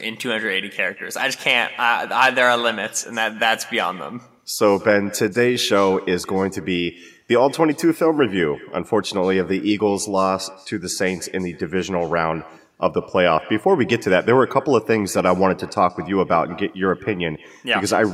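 From start to finish, the speech is trailed by an echo with no canceller: the far end's loudspeaker feeds its microphone and nothing subtracts it, so each phrase returns after the network round trip, roughly a fifth of a second late and about 21 dB down. Unlike room reverberation, which smears into a smooth decaying tail, this is a distinct, thinner repeat that starts after a clear gap and tracks every syllable.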